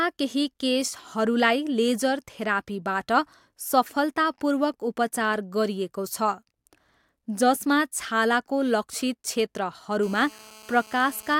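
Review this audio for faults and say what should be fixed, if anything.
GSM phone buzz runs from 10.03 to 11.35 s. It is a steady, raspy tone near 217 Hz, about 24 dB below the speech. A nearby 2G phone on a call pulses its transmitter, and the audio circuitry rectifies those bursts. Keep phones away from the recording chain.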